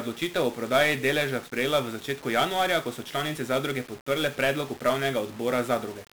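From the first moment to the last, the speech is wrapped in a dense, fuzzy crackle, with a steady hiss that buries the treble and leaves consonants smeared. This is heavy 1-bit DFPWM compression. Each sample keeps only a single up-or-down bit that nudges an adaptive level toward the waveform, so the signal is constantly overshooting and correcting. That coarse tracking produces broadband quantisation noise, and the character fits a stream of about 48 kbps.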